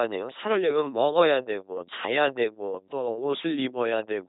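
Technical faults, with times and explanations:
Throughout, LPC-10 vocoder: the speech has a harsh, buzzing, robotic quality, with heavy damage, and nothing is heard above 3.8 kHz. The coder discards the real voice waveform and rebuilds each moment from a short resonance filter driven either by a regular pulse train, which makes the buzz, or by noise, which makes the hiss. Each stretch is forced to be fully voiced or fully unvoiced, which fits a 2.4 kbit/s LPC-10 coder.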